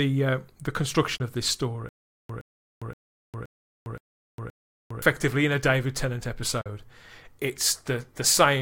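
At 1.17 s and again at 6.61 s, a Bluetooth dropout cuts the speech into silent holes of 27 ms and 40 ms, likely from late packets. The speech then resumes further along rather than repeating. From 1.89 to 5.02 s, a stutter with silent gaps plays the same 117 ms fragment six times, every 522 ms, with 405 ms of dead silence after each. This points to a stalled stream likely replaying its last buffer, and the speech that should have played during that stretch is lost.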